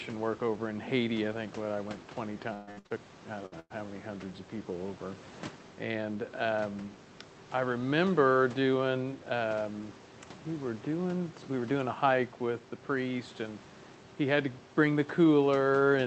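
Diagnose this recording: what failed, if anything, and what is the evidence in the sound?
Network stage, repeated packet loss (robotic sound), 2.53 to 2.92 s. Four gaps, the longest 137 ms, leave about three quarters concealed. Repeated last-sound filling makes the speech choppy and robotic.

Network stage again, two bursts of packet loss, 3.46 to 3.54 s and 3.60 to 3.72 s. About 60 ms and 100 ms of speech vanish. Concealment fades out, the second burst dropping into 20 ms of silence.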